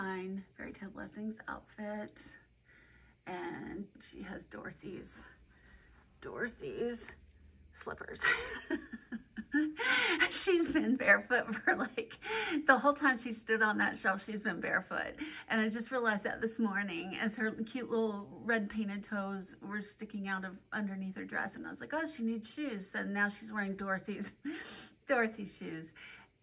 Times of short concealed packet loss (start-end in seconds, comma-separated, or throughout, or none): none